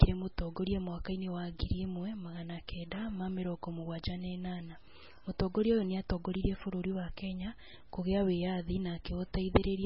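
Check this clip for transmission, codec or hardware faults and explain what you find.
One codec fault runs through the whole recording: MP3 compression, heavily applied. Nothing reaches above 5.6 kHz, so sibilants and breath noise lose their top and the speech sounds dull and boxed-in. The damage is heavy: short-lived spectral components flicker in and out between frames, giving a watery, swirling texture, and consonant onsets smear. This pattern is likely the result of an MP3 encoder starved of bits, consistent with a bitrate around 16 kbps.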